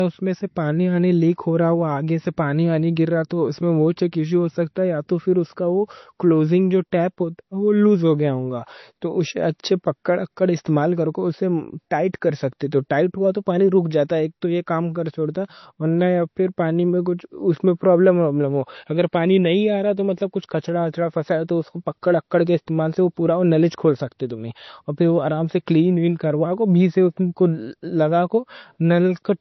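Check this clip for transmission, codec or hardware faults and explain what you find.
One fault runs through the whole speech clip: low-bitrate audio saved at a high bitrate. From start to finish there is nothing above 6 kHz, and the sound is dull and muffled, like heavily compressed MP3. The likely cause is a low-bitrate MP3, around 32 kbit/s, encoded again at a much higher bitrate. The second encoding keeps the artefacts and cut-off the first one left and cannot restore any of what it removed.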